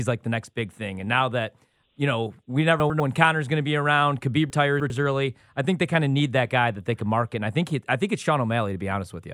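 Chunks out of order at 2.8 to 3.0 s, after "that you know we", and 4.5 to 4.9 s, before "early I think they". Here 100 ms chunks play one and three chunks late, giving a jumbled moment.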